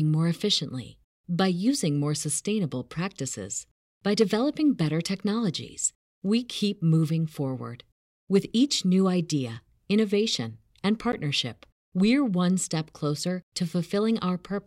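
A speech recording with a single block of digital silence at 11.12 s. For roughly 12 ms the signal drops straight to silence and then resumes, with no fade at either boundary, so the abrupt steps in and out of silence register as a short tick rather than an audible gap. The length of the dropout fits a 512-sample buffer that the processing chain failed to fill in time and that went out as zeros.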